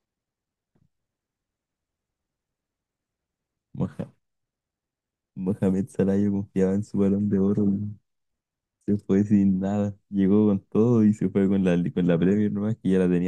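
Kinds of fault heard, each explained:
No technical faults can be heard in this speech.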